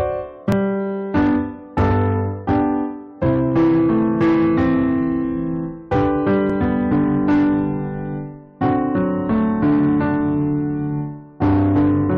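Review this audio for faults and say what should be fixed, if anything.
Hard clipping runs through the whole clip. A gain stage drove the signal about 9 dB past what the converter or format could hold, so roughly 7 percent of samples are cut flat. Those squared peaks add high harmonics, producing harsh fuzz on every loud passage. Lower the gain before the limiting stage so peaks stay below full scale.

Overlap between stream segments occurs at 0.52 s and 6.50 s, spaced to match 6-second segments. The segment timestamps overlapped, so the player discarded about 6 ms of audio at each boundary. The waveform jumps there, giving a brief click or skip. Generate segment timestamps from a continuous sample count so each segment begins exactly where the previous one ended.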